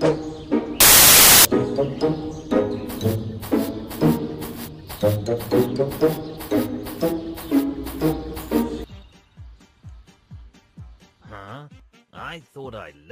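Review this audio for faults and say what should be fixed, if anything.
From 0.80 s to 1.45 s the audio turns into loud, broadband hiss: samples built from the wrong bytes. The reader has assembled each sample with its bytes misordered or shifted by one, so the rapidly changing low-order bits land in the high-order position and dominate the value. Unlike clipping or overload distortion, which still follows the original's shape, this noise does not follow the shape of the sound underneath. To prevent it, the decoder should be made to honour the stream's stated byte order and sample alignment at every read, including after seeks or buffer boundaries.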